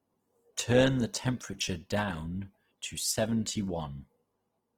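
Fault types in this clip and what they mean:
Opus compression: Throughout, the speech has a rough, grainy texture. Harmonic detail turns noisy and fizzy, yet the top end stays present across the full band instead of narrowing. The damage is plainly audible. The likely cause is Opus in its CELT music mode, which keeps each band's energy but fills bands short of bits with folded or noise-like content rather than leaving holes. The roughness fits a low bitrate of around 16 kbps.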